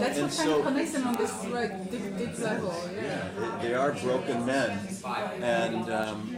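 Word clock ticks run from 0.16 s to 6.36 s: about twenty sharp clicks of uneven strength, roughly every 0.3 s. An unlocked receiver, its clock roughly 70 ppm off, slips one sample per slide, leaving single-sample waveform glitches and thin full-height spectrogram lines.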